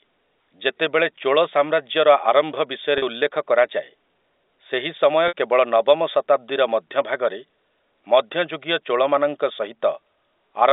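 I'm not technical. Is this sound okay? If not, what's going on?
No. Packet loss with pitch repetition happens at 2.98 to 3.02 s and again at 5.28 to 5.33 s. Small pieces of the speech, about 40 ms and 60 ms, went missing in transit. Each time, the receiver filled the gap by repeating the last bit of sound. The first gap makes a brief held, buzzy note; the longer second one fades into silence before the speech returns.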